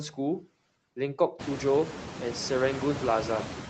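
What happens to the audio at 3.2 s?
The background noise under the speech dips between words and swells beneath them. These are noise suppressor artifacts, present throughout the clip. The suppressor pulls down bands it judges to be steady noise by about 6 dB, frame by frame. Since around 1.5 s the room noise has been much louder.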